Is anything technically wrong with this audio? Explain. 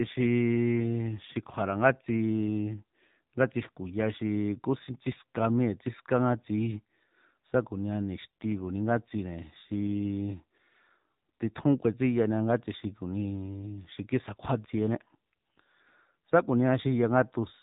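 Yes. Throughout the speech, the signal has passed through an AMR narrowband mobile codec. That codec rebuilds the voice from a vocal-tract model excited by a few pulses per short subframe. Nothing above 3.8 kHz survives, so the speech sounds boxed-in and telephone-like. The coding damage is plainly audible as a buzzy, synthetic edge on the voice, which fits one of the codec's lower modes, around 7.4 kbps.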